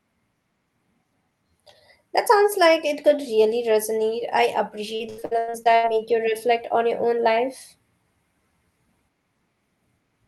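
Speech recorded over a call path that tops out near 12 kHz, which fits Opus at around 32 kbps, breaks into repeated packet loss with a robotic sound between 4.95 and 5.88 s. About nine short holes, the longest 84 ms, are patched by stretching the preceding sound, leaving nearly half that stretch synthetic and giving it a choppy quality. The quick succession of gaps is what sets this apart from a single dropout or steady codec noise.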